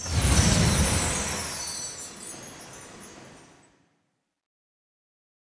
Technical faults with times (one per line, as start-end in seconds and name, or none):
none